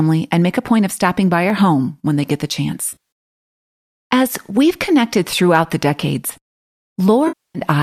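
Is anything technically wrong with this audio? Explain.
Yes. The speech has two kinds of fault: isolated clicks from dropped samples, and two patches of AAC frame loss with concealment.

Dropped samples occur at 1.50, 2.51, 6.05 and 7.00 s. Each one is a single sharp click. The likely cause is a fraction of a millisecond of samples going missing, so the waveform jumps straight from one value to a later one. No audible sound is removed. On a waveform each click shows as a small step discontinuity, and on a spectrogram as a thin vertical line running across all frequencies.

AAC frame loss with concealment hits twice. The first is at 2.89 to 2.97 s, where about 130 ms of audio is lost in scattered gaps spread over roughly 220 ms, the longest run being about 50 ms. The second is at 7.27 to 7.59 s, with about 270 ms lost. The decoder fills each gap by reusing the last good spectrum with altered phase, so the first stretch sounds smeared, noisy and phasey rather than silent, while the longer second one decays to a very faint noise floor and fades back in. 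On a spectrogram the harmonic detail blurs into a flat, repeated band, and the waveform loses its clear periodic shape. The stream these frames come from fits a low-delay AAC-ELD encoding at around 64 kbps.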